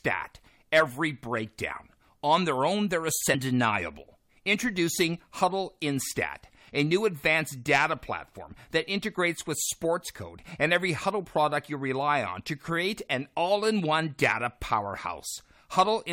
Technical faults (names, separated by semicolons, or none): stream segment skipped